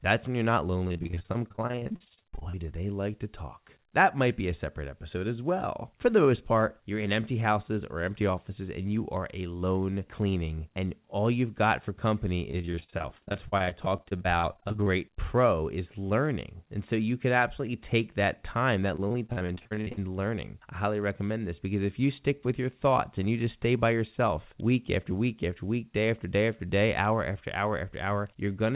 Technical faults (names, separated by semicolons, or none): repeated packet loss (robotic sound); electrical switching spike